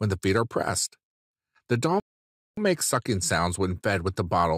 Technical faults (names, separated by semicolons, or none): one channel drops out; rebuffering stall